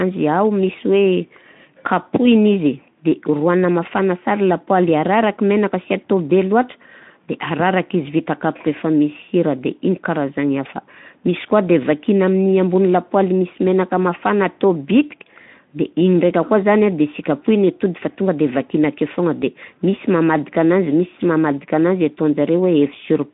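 No technical faults are audible.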